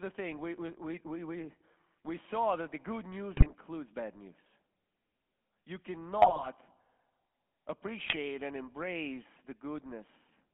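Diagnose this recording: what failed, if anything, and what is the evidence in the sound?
The whole speech clip has passed through the GSM full-rate codec. The speech has a constant buzzy, gravelly roughness, and the band is limited to about 200 Hz to 3.4 kHz, which fits the 13 kbps full-rate coder. The codec models the vocal tract with a short filter and rebuilds the excitation from a sparse grid of regular pulses, discarding two of every three samples. That coarse excitation produces the grainy texture.

GSM bit errors, a network-stage fault, break up the decoded speech three times. The first is at 3.37 to 3.52 s, just after "that the good news" and before "bad news". The second is at 6.22 to 6.72 s, the longest. The third is at 8.04 to 8.17 s, just before "and embrace the". Each produces squawks, pops and gargling. Corrupted filter, pitch and gain parameters distort the spectrum and level frame by frame, which suggests a bit error rate of a few percent.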